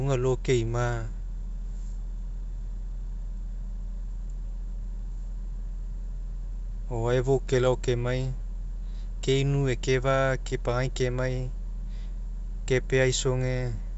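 The clip is speech carried over G.722 wideband telephone coding at 64 kbit/s, and nothing is technically wrong with it.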